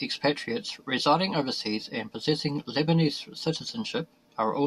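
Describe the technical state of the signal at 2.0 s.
Around 2.0 s the signal is intact, with no audible dropout, distortion, clicks or other technical fault at that point in the speech.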